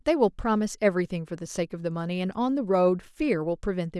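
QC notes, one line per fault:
No faults were found in the speech. Nothing in it needs a QC entry.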